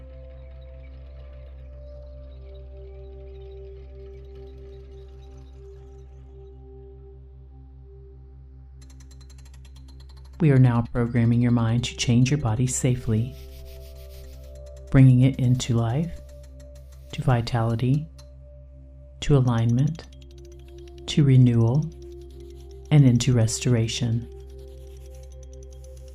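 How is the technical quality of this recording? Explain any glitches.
No glitches or technical faults can be heard anywhere.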